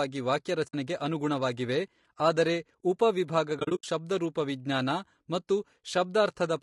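The whole clip has rough, grainy speech with a dulled top end, likely from low-delay AAC compression at a low bitrate, where too few bits leave noise between the harmonics.

Frame loss with muting hits at 0.67 to 0.74 s, just before "ಅನುಗುಣವಾಗಿವೆ ಆದರೆ ಉಪ", and again at 3.59 to 3.84 s, between "ಅನುಗುಣವಾಗಿವೆ ಆದರೆ ಉಪ" and "ಶಬ್ದರೂಪವಿಜ್ಞಾನ ಮತ್ತು". The decoder zeroed the lost frames, so the sound fades out and back in. The first hole is about 60 ms. The second is 160 ms of gaps spread over 240 ms, the longest around 70 ms.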